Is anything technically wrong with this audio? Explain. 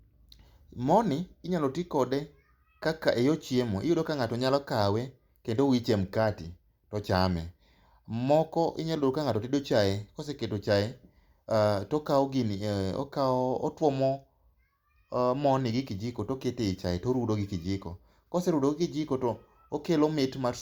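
No, nothing technically wrong can be heard in this speech recording; the signal stays stable and intact throughout.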